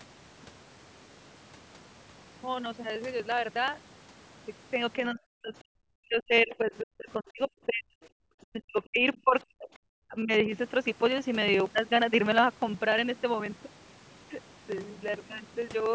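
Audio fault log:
0.08–15.86 s: periodic USB or driver dropouts. Every 0.06 s the driver stalls and about 4 ms of audio is skipped, heard as steady ticks through the speech.
4.98–5.20, 5.42–7.50, 7.66–7.96, 8.48–9.06, 9.23–9.35, 9.53–9.69, 10.07–10.50 s: speech suppressed in double talk. The echo canceller likely mistook overlapping talk for echo and cut the voice by up to about 40 dB in broken pieces.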